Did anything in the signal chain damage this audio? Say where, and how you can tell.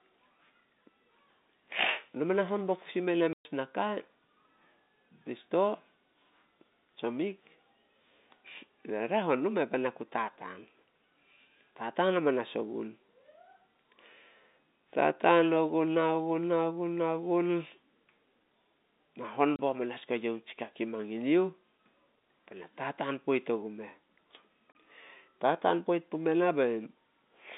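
Yes, at the network stage: dropped packets were replaced with silence, cutting hard-edged gaps into the speech at 3.33–3.45 s (120 ms, which fits four 30 ms packets), 19.56 s and 24.72 s.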